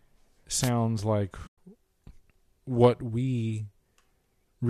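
From 0.61 to 0.70 s, a brief swish of static washes over the speech: a wireless microphone noise hit, where the FM radio signal faded as reflections cancelled and receiver noise rose. At 1.47 to 1.58 s, the speech drops into a soft-edged silent hole about 110 ms long. This is AAC frame loss with muting: the lost frames were decoded as zeroed spectrum, and the overlapping windows faded the sound out and back in. Throughout, the speech carries a faint graininess, likely from light low-delay AAC compression.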